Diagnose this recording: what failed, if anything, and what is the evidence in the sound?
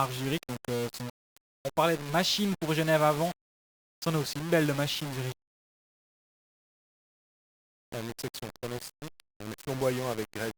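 Sample-format conversion is the likely failure: the speech sounds reduced to low bit depth without dither, for its whole length. Grainy distortion tracks the signal, quiet passages turn gritty or sputter, and the error sits only around 15 dB below the signal, which fits rounding to roughly 5 bits.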